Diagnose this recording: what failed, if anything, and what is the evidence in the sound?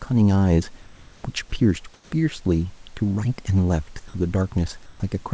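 In the call processing stage, discontinuous transmission likely stopped the sender between utterances, and the receiver put comfort noise in place of the background at 0.82–1.24 s, 1.94–2.12 s and 4.86–5.00 s. The room's detailed background turns into flat, featureless hiss, about 3 dB louder in the first two gaps and about 1 dB quieter in the last.

The sender's voice detector likely misjudged part of the sound as background, so sound was dropped by the voice detector at 1.50–1.52 s, losing about 10 ms, and at 4.08–4.14 s, losing about 40 ms. Each gap is filled with steady synthetic noise until the detector triggers again and speech returns.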